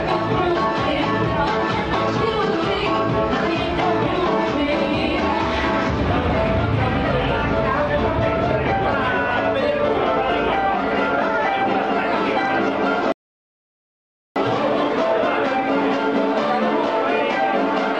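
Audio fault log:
13.12–14.36 s, rebuffering stall: the player drained its store of downloaded audio and halted until more data arrived. The sound drops into silence for about 1.24 s, then picks up exactly where it stopped, so nothing is lost but time is added.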